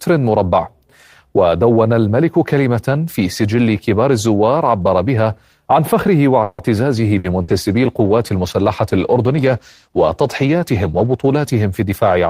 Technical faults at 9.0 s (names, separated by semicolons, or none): call bitrate drop